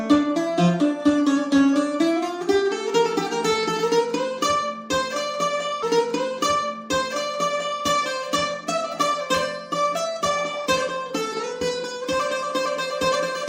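At 5.82 s the player handled the same stream segment twice, a stream segment repeated fault: having already played a stretch, it went back and queued that chunk again, adding 2 s to the running time. From 5.82 s to 7.82 s the audio plays material the listener has just heard, entered with a small blip where playback jumps back, and then carries on from where the first pass ended.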